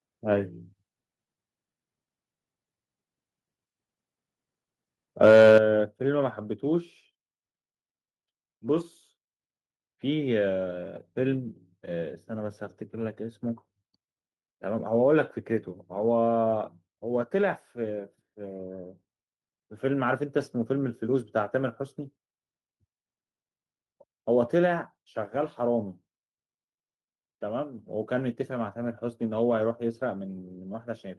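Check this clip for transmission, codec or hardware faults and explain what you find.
Two hardware-side faults occur together around 5.2 to 5.6 seconds. There are no transmission or codec problems.

From 5.23 to 5.58 s there is microphone overload. The loudest speech peaks go about 4 dB past full scale, and around 5% of samples are flattened. The likely cause is excessive input gain. Unlike codec distortion, the harsh crackle appears only on the peaks.

At 5.58 s the microphone volume is stepped down by about 8 dB in one abrupt drop. The voice and the background fall together, which sets it apart from a gradual automatic-gain fade.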